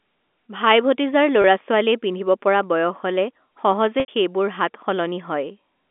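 Speech over a telephone line, with the narrow 250 Hz to 3.5 kHz band of G.711 coding and two brief glitches. At 1.42 to 1.44 s the sound briefly holds on a buzzy, sustained pitch. At 4.00 to 4.08 s a longer hold fades toward silence before the speech cross-fades back in. Both are packet loss with pitch repetition: the receiver loops the last pitch period to cover 20 ms and then 80 ms of missing audio, which points to one lost packet and then four.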